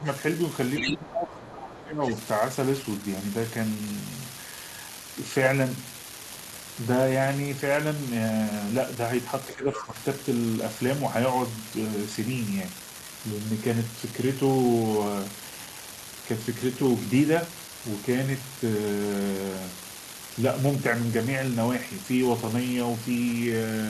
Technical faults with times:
0.00-23.90 unreliable data bit
0.00-0.07 speech suppressed in double talk
0.77-0.93 other side's voice leaking through
0.79-2.16 speech suppressed in double talk
1.70-1.81 other side's voice leaking through
9.47-9.98 speech suppressed in double talk
9.73-9.86 other side's voice leaking through

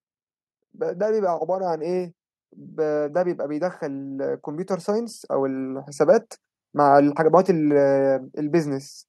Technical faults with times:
2.80-7.24 automatic gain rising

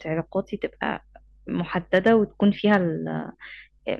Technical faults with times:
1.94-2.11 hard clipping
2.74 hard clipping

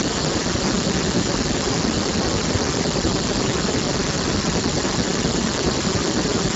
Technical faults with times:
0.00-6.55 Speex codec

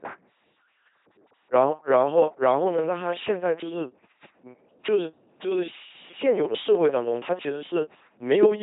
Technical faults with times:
0.00-8.62 LPC-10 vocoder

